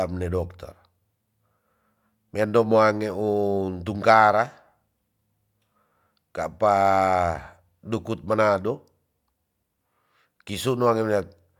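Nothing stood out as a technical fault on listening to this speech recording.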